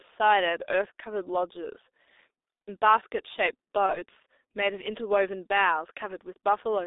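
From the start, the speech passes through the G.723.1 codec. Only 300 Hz to 3.7 kHz survives, and heavy low-rate coding, fitting about 6.3 kbit/s, leaves it muffled, hoarse and smeared. At 3.86 s, VoIP packet loss concealed by the speech codec begins. The decoder fills a gap fitting one lost 30 ms frame with a fading buzz or coloured noise, and the voice stays distorted until 3.95 s.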